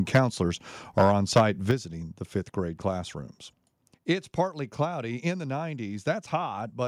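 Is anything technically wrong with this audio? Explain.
Yes, there are two kinds of fault. The first is microphone overload at 0.14 to 0.19 s and 0.98 to 1.42 s. The input gain was likely set too high, driving peaks about 7 and 8 dB past the converter's ceiling. The tops are flattened, giving a harsh, crackling edge; in the first burst roughly a tenth of the samples clip.

The second is microphone volume stepped down at 0.16 s and 1.71 s. Software likely reacted to the clipping by cutting the input level in one step, by about 4 dB and then about 6 dB. Each time, sound and background drop abruptly, the second just before "the fifth grade classrooms".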